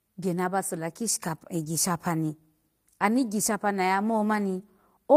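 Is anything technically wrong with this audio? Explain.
Yes. From 1.61 to 1.67 s there is a lost packet rebuilt from error correction. About 40 ms of speech sounds rougher and noisier than the surrounding audio, which fits two lost 20 ms packets. There is no gap or dropout. Each following packet carried a low-bitrate backup copy of the lost one. The decoder played those copies in place of the missing audio. The continuity holds, but the detail is coarser for that brief stretch.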